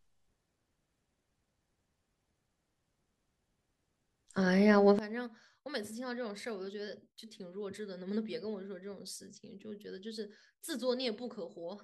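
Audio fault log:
4.99–11.83 s, one channel inverted: from here to the end the level falls by about 21 dB and what remains is a faint copy. The likely cause is reversed polarity on one side cancelling the shared centre content when summed to mono. Unlike a plain gain drop, the shared content vanishes while a faint difference signal survives.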